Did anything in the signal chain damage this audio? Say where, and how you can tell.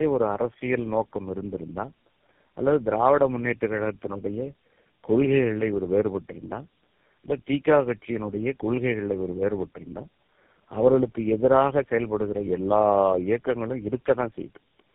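Yes, at the codec stage, for the whole clip. The speech is rough, muffled and warbly, with nothing above 3.8 kHz. That points to tandem speech coding: roughly three low-rate speech codecs in a row, each re-encoding the previous one's degraded output.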